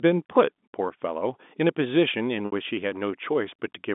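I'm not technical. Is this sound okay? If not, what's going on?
No. Packet loss with pitch repetition at 2.46 to 2.52 s: 60 ms of speech went missing, and the receiver repeated the last voice cycle, causing a brief buzzy hold.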